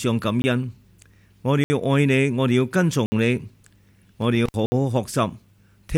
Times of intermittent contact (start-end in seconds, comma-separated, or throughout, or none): 4.46-4.54